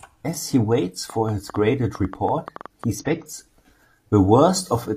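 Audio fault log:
1.10–2.85 s, train of clicks: right after "he waits" a run of roughly fifteen sharp ticks rides over the speech, about 6.9 a second on average but spaced unevenly, and they keep going through the gaps too. They're loud, around 5 dB above the speech at their peaks, and they all have much the same shape. That points to something outside the recording itself, likely interference from nearby gear or a faulty connection or power supply, dropping the same pulse in again and again.
2.98–3.08 s, compressed frames skipped: here the speech jumps forward, with something like 50 ms of audio simply gone. That's what you'd expect when whole frames go missing from the file or get thrown out by the decoder as damaged. The jump lands on a multiple of the frame length, so the speech carries on slightly ahead of where it should be.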